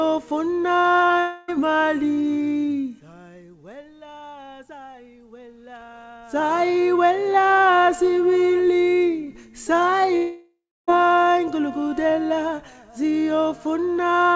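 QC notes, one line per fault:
0.80–0.86 s and 1.08–1.12 s, short concealed packet loss: audio data failed to reach the decoder in time, about 40 ms at the first point and about 20 ms at the second. The receiver filled each gap by extending the sound just before it and then blending back into the real signal. Each fill comes out as a brief smear or wobble, and a very short sound event falling inside one of these gaps can vanish.
1.20–1.50 s and 10.16–10.89 s, long network dropout: these longer gaps were likely caused by audio not arriving for a sustained stretch, about 280 ms and about 720 ms. In the first gap, the continuation of the last sound runs the whole length as a fading buzz or hiss, with no true silence. In the second, the synthetic continuation fades out and leaves about 290 ms of silence. Audio then resumes, with nothing above 8 kHz in this call path, and the lost portion is skipped rather than delayed.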